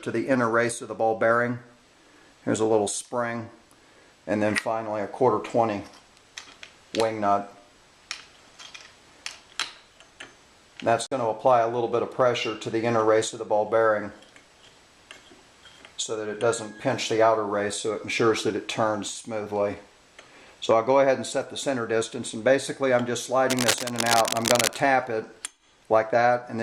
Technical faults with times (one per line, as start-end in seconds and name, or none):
11.06-11.12 Bluetooth dropout
23.50-24.80 cable scratch noise